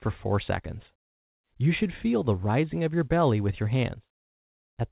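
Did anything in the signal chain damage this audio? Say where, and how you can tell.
No, no stage caused damage.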